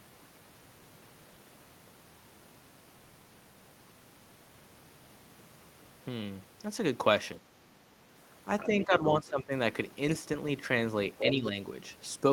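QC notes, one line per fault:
7.39–7.46 s, 8.68–9.52 s, 11.26–11.55 s: speech suppressed in double talk. The talker's level drops while the far side talks over them, by about 10, 15 and 5 dB. The longest dip lasts about half a second. The likely cause is an echo canceller that could not separate the talker from the loudspeaker echo and turned both down.
8.59–8.86 s, 11.18–11.29 s: other side's voice leaking through. A second voice sits under the talker in short scraps. It is about 15 dB below the talker at first, then about 5 dB below. This is likely loudspeaker sound that the echo canceller failed to remove from the microphone signal.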